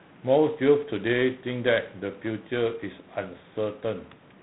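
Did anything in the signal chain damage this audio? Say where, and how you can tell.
Yes, at the codec: G.726 ADPCM at a rate that fits 24 kbit/s coarsely quantises the prediction error, so throughout the speech a harsh, rasping hiss tracks its level and nothing above 4 kHz survives.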